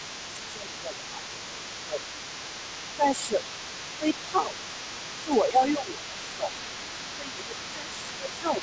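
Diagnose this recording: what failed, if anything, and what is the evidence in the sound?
Other side's voice leaking through, from the call processing stage: a second voice runs under the speech across the whole clip, from 0.0 to 8.62 s, roughly 15 dB below it. The likely cause is an echo canceller that left residual loudspeaker pickup in the microphone signal.

Speech suppressed in double talk, also in the call processing: the main voice dips at 0.4–2.08, 2.96–3.4, 3.67–3.74, 3.98–4.8, 5.24–6.19, 6.36–6.5 and 6.98–8.62 s. The deepest dips are around 15 dB. While both sides overlap, the canceller likely treated the near talker as echo and attenuated both.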